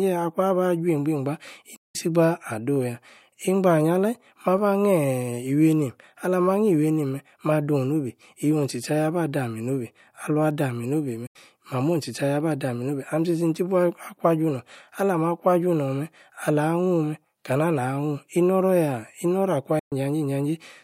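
At 1.76, 11.27 and 19.79 s the speech cuts to silence for about 180, 80 and 120 ms, then resumes further on. This is likely a Bluetooth dropout from late, discarded packets.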